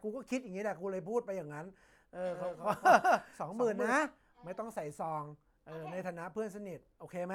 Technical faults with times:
2.33-3.93 doubled audio track

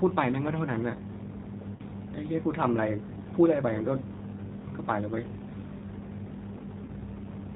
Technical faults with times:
0.00-7.55 G.729 codec
1.76-1.81 VoIP packet loss concealed by the speech codec
6.85-6.90 VoIP packet loss concealed by the speech codec

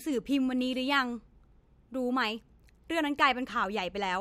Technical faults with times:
3.50-3.52 chunks out of order

